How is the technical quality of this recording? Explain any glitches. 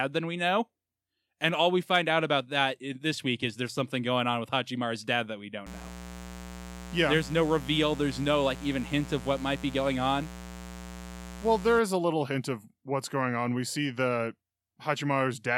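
The recording is marred by one clear fault in the middle of the speech. From 5.66 to 11.79 s a steady, raspy mains buzz sits roughly 15 dB under the speech. Sharp switching spikes, twice per 60 Hz cycle, leak in through poor shielding or nearby rectifier or dimmer circuitry, spreading harmonics up into the kilohertz range.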